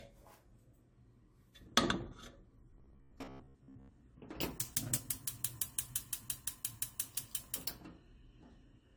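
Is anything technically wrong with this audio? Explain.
Yes. Two problems can be heard.

Generation loss runs through the whole clip. The sound is swirly, smeared and hollow, and sharp attacks lose their edges. This is likely the result of repeated lossy coding: the artefacts fit AAC-LC at 64 kbit/s applied about three times over. Each pass quantises on a shifted frame grid. The noise and spectral gaps from each pass pile up.

From 2.71 to 3.91 s there is robotic sound from repeated short buffers. The audio turns into a rigid, metallic buzz at 66.8 Hz. It still loosely follows the underlying sound. The likely cause is late-arriving audio. The playback side filled the gaps by looping the last chunk, about 15 ms long, which fits the buzz pitch. Roughly half of this stretch is repeated material, and the real audio it replaced is lost.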